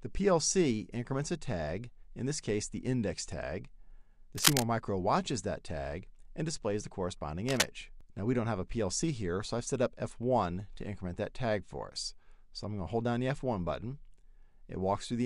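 From 4.35 to 4.64 s and 7.49 to 7.67 s, cable scratch noise appears: dense, uneven rustling, first louder than the sound, then about level, likely from a worn contact being moved. Unlike isolated clicks, it lasts for a moment rather than an instant.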